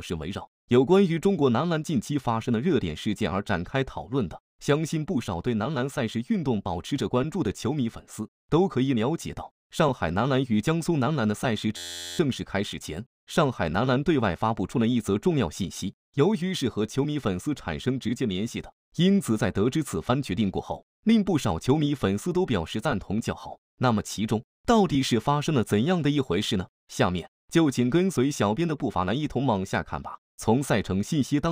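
From 11.77 to 12.19 s the audio freezes into a system hang loop. The machine or its driver stalled while the sound hardware kept replaying one ring buffer, so a single 11.61 ms slice repeats exactly, which fits a 512-sample buffer. The loop is that short, so it sounds like a steady 86.1 Hz buzz. Unlike a dropout, there is no silence or gap, and essentially no audio is lost.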